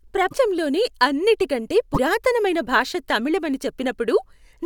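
At 0.30 to 0.34 s and again at 1.93 to 1.98 s the speech skips ahead with a brief garbled break. This is likely a broken MP3 bit reservoir: after missing frames, roughly 24 ms each, the decoder reads borrowed bits from the wrong frame.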